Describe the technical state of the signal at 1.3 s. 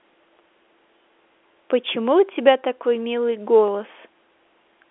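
At 1.3 s the audio is intact: the telephone-band sound carried by the G.711 coding, limited to roughly 300 Hz to 3.5 kHz with nothing above about 3.7 kHz, runs cleanly there with no fault.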